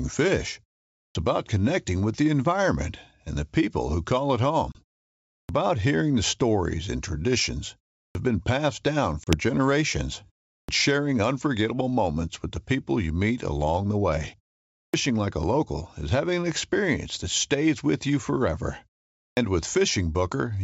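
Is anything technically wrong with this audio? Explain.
Yes, there are two faults.

Clipped start after a pause occurs at 1.06, 5.4, 8.06, 10.59, 14.85 and 19.29 s. After silences of about 0.34 to 0.64 s, the output path has gone idle. It needs roughly 80 to 95 ms to wake, so each phrase begins abruptly with its opening sounds missing.

Packet loss on an ADPCM call occurs at 4.72 and 9.24 s. About 30 ms of audio, likely a few packets, drops out as a hard-edged hole. The decoder's adaptive predictor and step size then no longer match the sender's, so the speech comes back slightly distorted before it settles. That recovery is the audible difference from a clean gap in the otherwise clear G.722 wideband audio.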